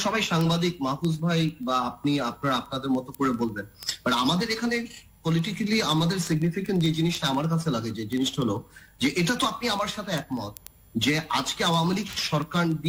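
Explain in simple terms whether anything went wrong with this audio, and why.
Word clock ticks: sharp clicks about twenty times a second from 0.12 s to 12.86 s, because the receiving clock wasn't locked to the sender's.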